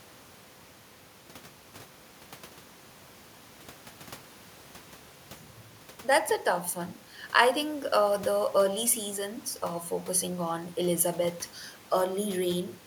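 Nothing stood out on listening to the speech, apart from a faint background noise in the room, sitting about 27 dB below the voice.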